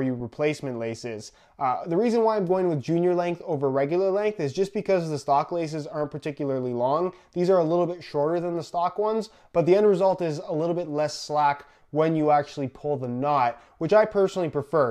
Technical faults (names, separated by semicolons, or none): none